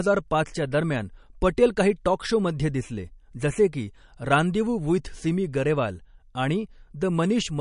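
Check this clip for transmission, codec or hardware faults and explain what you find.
One codec fault runs through the whole clip. Nothing is heard above 10.6 kHz, and the damage is plainly audible. It is likely MP3 compression, which fits a low bitrate near 40 kbps. Starved of bits, the encoder cuts the treble and drops weak frequency lines frame by frame. The speech sounds dull and watery, with swirly, chirping s sounds.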